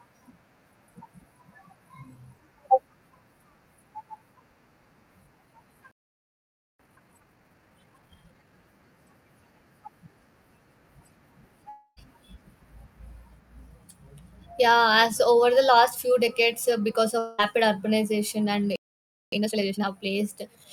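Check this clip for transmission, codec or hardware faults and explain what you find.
Three kinds of fault are present in this speech clip, each occurring twice.

Playback stall: at 5.92 s the speech halts mid-flow and stays silent for 0.88 s until 6.79 s, then again from 18.76 s for 0.57 s until 19.32 s. The likely cause is the player running out of buffered data or having its thread blocked.

Time-compressed catch-up: straight after each stall the speech sounds hurried but keeps its normal pitch. This runs at 1.5 times speed from 6.79 to 8.53 s and at 2 times speed from 19.32 to 19.88 s. The player is clearing its backlog by cutting out short pieces and cross-fading across the gaps.

Long network dropout: at 11.69 s the speech turns into a buzzy, fading continuation of the last sound lasting about 0.28 s, followed by a brief silence of roughly 30 ms, before resuming at 11.99 s. At 17.19 s a similar fill of about 0.2 s runs straight back into speech at 17.40 s. 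The receiver likely stopped getting packets and concealed the gap by extending the last sound, so the audio that was never received is missing.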